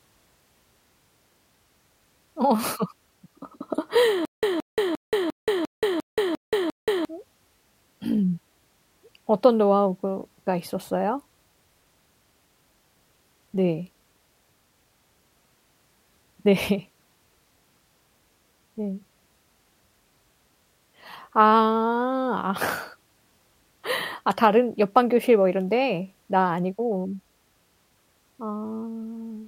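Speech with a stutter with silent gaps from 4.25 to 7.05 s: a 172 ms fragment repeats eight times, separated by 178 ms of digital silence, likely a stalling stream losing the audio meant for that span.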